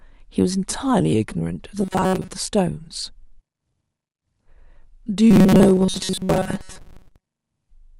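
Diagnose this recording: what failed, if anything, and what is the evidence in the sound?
The speech turns into robotic sound from repeated short buffers at 1.82 to 2.31 s and again at 5.31 to 7.23 s. A rigid, metallic buzz sits at 188 Hz. That fits a loop of about 5.3 ms. The likely failing stage is driver or buffer underrun, with most of the real audio skipped.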